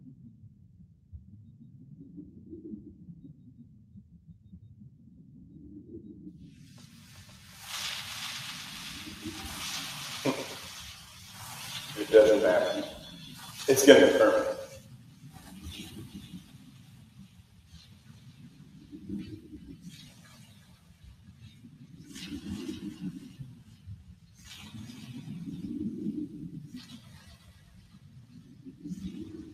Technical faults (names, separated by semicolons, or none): noise suppressor applied to music or sounds; sound cut by the noise suppressor